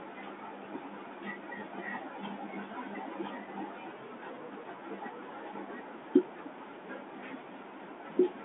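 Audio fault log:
No audible faults found.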